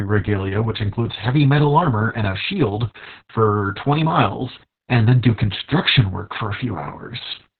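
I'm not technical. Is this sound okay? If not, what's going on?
No. Opus voice compression squeezed this speech very hard from start to finish, discarding everything above 4.4 kHz, so it sounds muffled, hoarse and slightly robotic.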